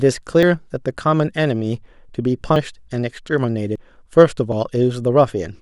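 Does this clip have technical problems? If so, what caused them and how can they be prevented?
Yes. At 0.43, 2.56, 3.76 and 4.52 s the speech jumps ahead about a tenth of a second, with no gap. That's likely a dropped buffer (overrun), where samples got overwritten before the software read them. A larger buffer or lighter CPU load prevents it.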